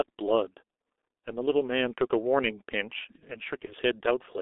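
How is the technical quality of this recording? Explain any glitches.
The technical quality is poor. The speech is heavily coded throughout, and there is one brief dropout near the end.

The G.723.1 codec damage runs through the whole clip. This low-rate telephony codec works in 30 ms frames, and the sound fits a bitrate of about 6 kbit/s. Nothing below 300 Hz or above 3.6 kHz survives. The voice is muffled and hoarse, and its consonants are smeared.

VoIP packet loss, concealed by the speech codec, occurs from 3.65 to 3.74 s. About 30 ms of data went missing, which fits one lost frame. The decoder filled the gap by repeating its last pitch and filter at falling gain. The result is a short stretched, fading sound, and the voice stays weak for a moment after the gap.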